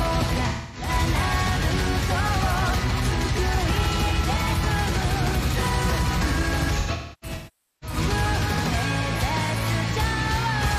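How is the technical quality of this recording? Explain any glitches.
The recording has two glitches from AAC frame loss with concealment. From 0.48 to 0.89 s, about 256 ms of frames drop out. The decoder repeats the last good spectrum with scrambled detail, giving a smeared, noisy patch. From 6.79 to 7.97 s, losses scatter over about a second, totalling about 853 ms. The longest run is about half a second, so the concealment fades toward silence before the sound returns.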